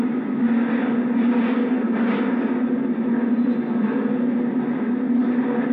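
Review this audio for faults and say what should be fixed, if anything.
Nothing to fix: no technical faults are audible anywhere in the audio, so no corrective or preventive action is needed.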